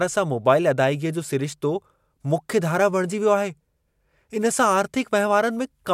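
A speech recording, with nothing technically wrong with it.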